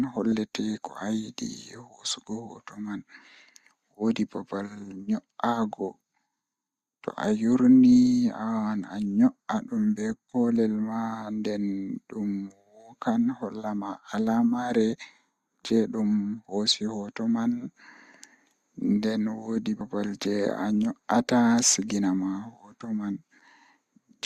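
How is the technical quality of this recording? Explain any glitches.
There is one glitch, at 0.32 s: compressed frames skipped. The decoder lost or rejected what sounds like a single frame, consistent with a frame length of about 26 ms, so the speech jumps ahead by roughly 30 ms. The overlapping neighbouring frames blend the join into a short smeared blip instead of a sharp click.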